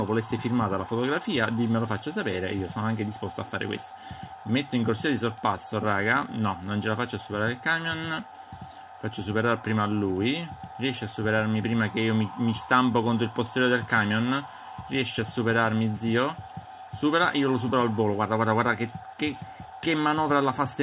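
Nothing in this one catches the ear as a fault; the audio just rolls along from its first moment to its last without a glitch worth pointing to.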